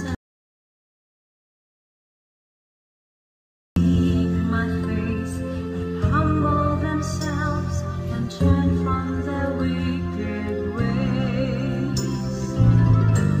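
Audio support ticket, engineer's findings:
Audio dropout to silence, 0.15 to 3.76 s: about 3.6 s of dead silence, no room tone, sound cuts in mid-flow at the end. Likely input lost upstream (cable, interface link or stray mute) while the recorder kept writing. Missing content isn't recoverable.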